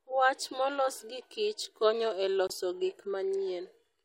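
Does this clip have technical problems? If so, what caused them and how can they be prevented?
Yes. Right after "konyo e", a corrupt frame muted fault cuts the speech to silence from 2.47 to 2.51 s. The 40 ms hole fits a single frame that arrived with flipped bits, which the decoder rejected, so the player filled its slot with silence and kept the timing intact. On the waveform this shows as a flat line with an abrupt start, and on the spectrogram as a clean vertical blank band across all frequencies. To prevent it, protect the compressed stream with error checking and retransmission or forward error correction, and use packet-loss concealment so a rejected frame is replaced by an estimate rather than silence.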